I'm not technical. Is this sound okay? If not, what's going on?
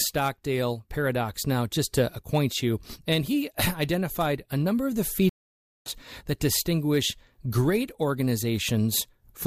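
No. At about 5.29 s the connection carrying the audio dropped, and the player had to reconnect and start decoding again from wherever the stream had got to. That is a stream reconnect. You hear it as roughly half a second of silence after "a number of the", lasting until about 5.91 s. When the sound returns with "that distinguish great", it has skipped ahead by a little under half a second, so that stretch is simply missing.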